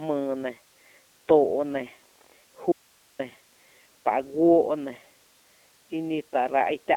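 From the start the speech runs through the iLBC codec, a narrowband VoIP coder. Nothing above 3.8 kHz survives. The line band sits between about 250 Hz and 3.7 kHz. Each 30 ms frame is coded on its own, with the excitation built fresh. At a rate that fits 13.33 kbps, the damage is plainly audible. The speech stays clear but sounds rough and slightly synthetic.

At 2.72 s the signal drops out abruptly, leaving a faint residue. For about 0.47 s, until 3.19 s, only hiss remains, roughly 35 dB below the speech. The path after the break stays live. The likely cause is the signal being lost upstream. It cuts in and out sharply, unlike a pause or a fade.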